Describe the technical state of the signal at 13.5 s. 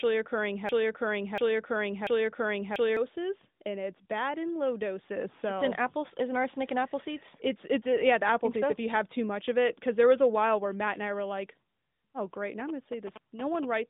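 At 13.5 s you're near the end of GSM signalling bursts, which run from about 12.6 s to 13.65 s. A 2G phone close by is signalling, and the audio circuitry rectifies those radio bursts into sound: a galloping dit-dit-dit of short buzzes at a 217 Hz rate, sitting roughly 15 dB under the speech. It rides on top of the narrowband mobile line, which carries nothing above about 3.8 kHz.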